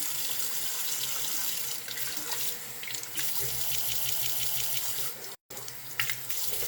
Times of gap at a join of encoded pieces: 5.35-5.50

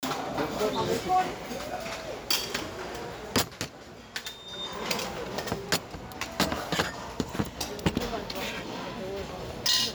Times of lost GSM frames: none

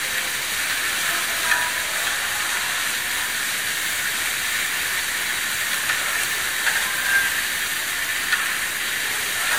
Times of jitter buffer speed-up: none

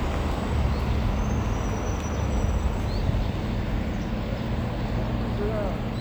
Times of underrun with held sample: 1.52, 2.95

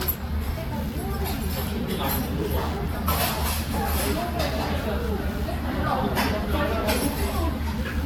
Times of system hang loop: none

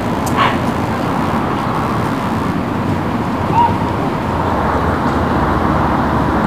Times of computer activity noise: 0.00-2.53

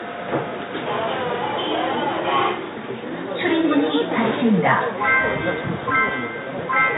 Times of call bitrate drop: none

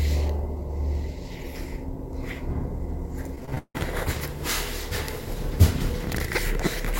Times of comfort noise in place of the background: none

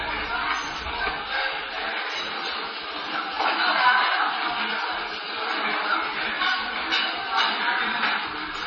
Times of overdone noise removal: none

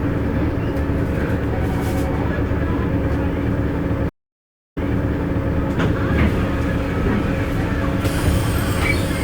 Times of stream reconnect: 4.09-5.54

